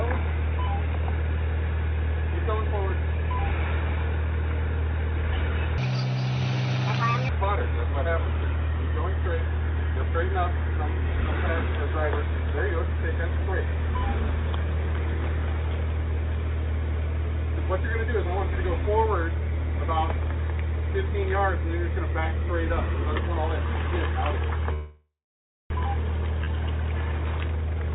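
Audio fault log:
5.78–7.29 s, section at the wrong speed: this stretch runs 1.63 times too fast, so it's rushed and jumps up about ten semitones in pitch, with speed and pitch moving together. It's likely been played or edited against the wrong clock.
24.73–25.72 s, call audio freeze: the sound stalls for nearly a second. The last bit gets stretched into a fading buzz or hiss, then about 0.61 s of silence, before it resumes right where it stopped. That's likely packets held up and the jitter buffer running dry, so nothing's lost, just delayed.
26.44 s, skip ahead: a sudden forward jump with only a tiny gap. Around a third of a second of audio is gone, and the two sides are butted straight together. That stretch was dropped while later audio was already waiting.
27.05–27.90 s, jitter buffer speed-up: the tail plays at 150% speed with the pitch unchanged, so it sounds hurried but not squeaky. 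The receiver is trimming lots of tiny pitch-period slices, roughly 0.4 s in total, to shrink the backlog.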